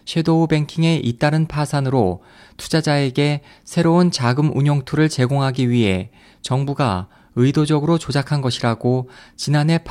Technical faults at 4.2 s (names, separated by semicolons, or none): none